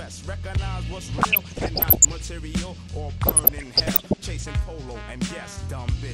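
DAB burbling appears from 1.18 to 2.18 s and again from 3.23 to 4.23 s. Weak reception, with bit errors of roughly 0.7 percent, lets corrupted samples and scale factors through, so individual sub-bands jump in level frame by frame, giving short blips of noise and sudden level jumps in parts of the sound.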